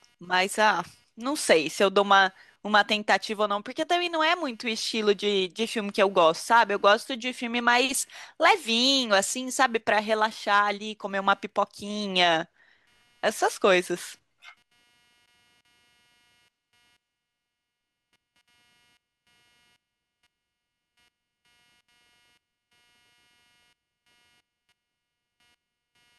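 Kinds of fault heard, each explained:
Computer activity noise: faint buzzing pulsing around 200 Hz, far below the speech, from computer load disturbing the shared ground; unlike mains hum, it follows computer activity, not the sound.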